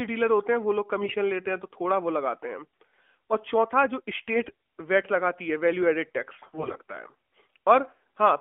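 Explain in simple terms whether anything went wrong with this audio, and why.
Three short stretches suffered AMR bit errors: at 1.02 to 1.16 s, 4.34 to 4.52 s, and 6.42 to 6.78 s. The phone link was weak there, so some of the less protected bits in the AMR frames arrived flipped, roughly 10, 7 and 15 percent of bits, and worst in the last stretch. The decoder still trusted those frames and rebuilt the speech from partly wrong instructions. At those moments the speech stays at about the same pitch and loudness but turns hoarse, scratchy and gargly.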